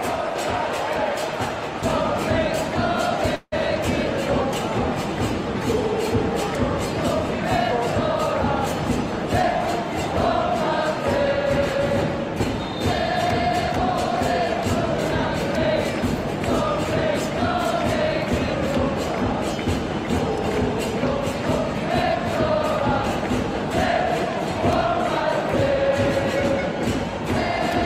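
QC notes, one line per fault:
3.35–3.54 s, call audio freeze: playback stalls for about 0.19 s, likely because packets were delayed and the jitter buffer ran dry. The last sound is stretched into a buzz or hiss that fades to about 40 ms of silence, 166 ms of fill in all, before audio resumes where it left off, nothing lost. Spectrogram shows smeared, decaying horizontal bands, then a short blank strip.
9.42 s, skip ahead: roughly 70 ms of audio is dropped and the two sides are butted together, with only an 8 ms bridge, so the sound lurches forward. The waveform shows an abrupt discontinuity; the spectrogram shows a vertical seam.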